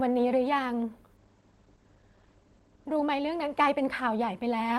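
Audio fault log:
1.17–4.45 s, call bitrate drop: the encoder's bit budget is squeezed, so the speech loses its airy top end and takes on a rough, watery texture, with the band above 8 kHz cut away where it had reached 20 kHz before. The coarseness fits a fall from about 40 kbps to 15 kbps, and it is worst for roughly 1.44 s at the lowest rate before the encoder recovers and detail returns.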